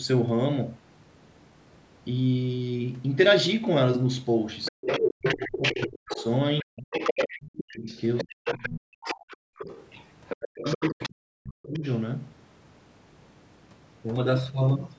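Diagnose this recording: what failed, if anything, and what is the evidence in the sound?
From 4.65 to 11.1 s a second voice runs underneath the speech at a level only a little below the talker's, about 5 dB down, and a fainter scrap returns at 11.74 to 11.98 s, about 20 dB down. This is the other side's voice leaking through, and the likely stage is call processing. The far end played on the talker's loudspeaker, reached the microphone, and the echo canceller left much of it in the send path.

Across the same stretch the talker's own speech repeatedly sinks, at 4.71 to 6.79 s, 7.72 to 9.7 s and 10.35 to 11.82 s. It falls by around 40 dB at its deepest, for about a second and a half in each of the first two spans and about a second in the third. This is speech suppressed in double talk, again likely in call processing. With both sides talking, the canceller could not separate near speech from echo and attenuated everything. 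The call microphone processing leaves nothing above 8 kHz, which is normal.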